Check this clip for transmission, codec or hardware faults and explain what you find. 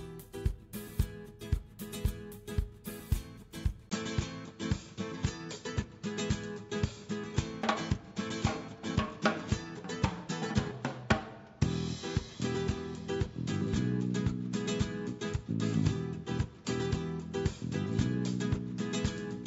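There's one fault here. At 3.89 s, after a 20 ms gap, the sound turns duller, with nothing above 7.6 kHz, and a fresh noise floor appears around 35 dB down while the level barely moves. That's most likely the input switched to a poorer device.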